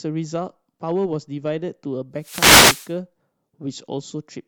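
A short speech recording carries one wireless microphone noise hit from 2.18 to 2.96 s, a burst of static lasting about 0.78 s. The analogue FM radio link faded as reflected signals cancelled, so receiver noise rose over the voice. On a spectrogram this shows as a broadband wash of noise across the whole frequency range for that span. On the waveform the envelope thickens with a rough, noisy fill.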